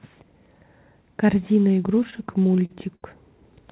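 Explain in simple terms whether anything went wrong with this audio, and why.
Between 1.88 and 3.04 s the speech hits repeated stalls (stutter): it catches and drags in a dozen small hiccups, the longest about 68 ms. The data was arriving late over the call, so the playback buffer kept running dry, and each time the receiver stretched the last bit of sound to cover the wait. Nothing is actually lost, roughly a fifth of a second is padding, but it sounds halting. The muffled, phone-like tone, with nothing above 4 kHz, is just the normal call codec.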